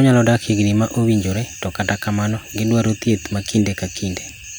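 No technical faults are audible.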